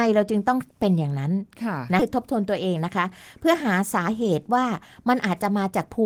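At about 2.0 s the speech lurches forward with no gap: a chunk of around 0.7 s simply isn't there, and the sound on either side is butted together almost seamlessly. This is a skip ahead. Audio that was already queued got discarded, either lost in transit or dumped when the jitter buffer overflowed, so playback jumped to later material and the delay dropped by roughly the same amount.

Shortly after, from 2.59 to 3.05 s, the speech sounds slightly rushed while the pitch stays put. It runs at 107% speed and sheds a few tens of milliseconds. It happens again, longer, from 3.46 to 5.99 s at 106% speed, trimming something like 150 ms. This is a jitter buffer speed-up. With more audio held than its target, the receiver repeatedly cut out tiny pieces, each a pitch period or a few, to bring the latency back down, which compresses the timing without changing the pitch.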